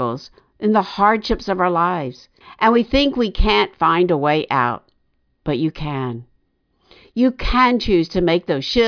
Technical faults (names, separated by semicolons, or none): none